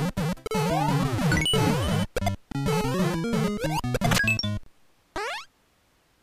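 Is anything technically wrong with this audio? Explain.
Yes. Three gaps at a join of encoded pieces, at 0.47 s (37 ms), 2.52 s (28 ms) and 4.63 s (29 ms), come from untrimmed encoder delay and end padding. Each is a brief dropout, a flat waveform and empty vertical spectrogram stripe, before the sound resumes where it stopped.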